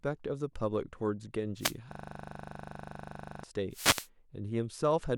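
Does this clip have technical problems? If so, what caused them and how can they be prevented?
Yes. There are two wireless microphone noise hits, from 1.58 to 1.76 s and from 3.70 to 4.09 s. Each is heard as a burst of static swishing over the speech. An analogue FM microphone loses signal strength when reflected radio paths arrive out of phase and cancel, and the receiver's noise floor rises up through the audio. The second hit is longer. Prevention: use diversity receivers, keep a clear line of sight between microphone and receiver, and position the antennas properly.

From 1.92 to 3.43 s there is a system hang loop. A single 40 ms slice of audio repeats exactly, about 38 times, and it comes across as a steady buzz at 25 Hz instead of continuing speech. The host or audio driver stopped supplying new data, but the interface kept replaying the same ring buffer, which fits a buffer of about 40 ms. 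Prevention: run stable drivers, avoid CPU or power-management stalls during recording, and monitor for dropouts.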